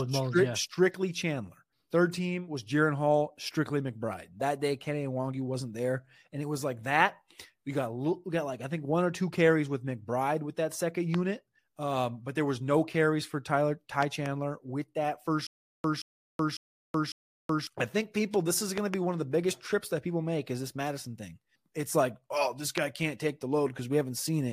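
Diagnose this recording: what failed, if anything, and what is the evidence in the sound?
Loud pops, likely from a voltage step in the analogue wiring or a driver glitch. A single pop comes after "with that second" at 11.14 s, and a double pop at 14.03–14.28 s. Another double pop follows "think people this is" at 18.78–18.96 s, just before "one of the biggest". A final single pop lands at 22.78 s, between "it's like oh this" and "can't take the". Each peaks about 15 dB over the speech, the last about 20 dB. On a waveform they are tall narrow spikes, and on a spectrogram thin full-height vertical lines, with the speech continuing underneath.

Stutter with silent gaps from 15.47 to 17.67 s, likely a playback or streaming stall. The player kept retrying, replaying the same 175 ms fragment and then running dry for 375 ms, so the burst returns four times on a steady 550 ms cycle. The waveform shows identical blocks separated by flat silent stretches. 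On a spectrogram the repeated patches are separated by fully blank columns. The speech that belonged in that span is missing.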